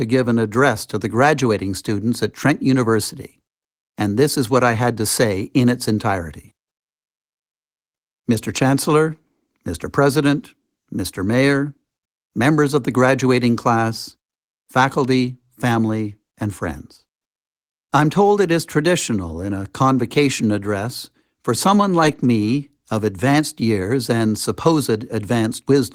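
From 22.03 to 22.25 s, after "convocation address for someone", six lost packets are rebuilt from error correction: rough, noisy low-bitrate copies replace the missing audio with no audible gap.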